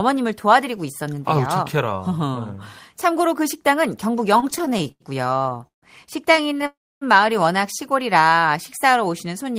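From 4.37 to 5.84 s the speech drags and catches in 21 small hitches, the longest about 150 ms, with 427 ms of stretched sound in all. These are repeated stalls (stutter): packets kept arriving late, the jitter buffer kept running dry, and the receiver extended the last sound each time rather than dropping anything. A shorter burst of six tiny catches, none over 12 ms, follows from 6.36 to 6.64 s.

Right after, from 6.66 to 7.03 s, the sound hangs and fades, then goes silent for about 280 ms before resuming where it stopped. This is a call audio freeze, likely from packets held up in transit, adding 350 ms of delay.

From 8.08 to 9.05 s the speech runs at 93% speed with its pitch unchanged, sounding slightly drawn out. This is a jitter buffer slow-down: the receiver repeated single pitch periods to rebuild its reserve, adding 72 ms.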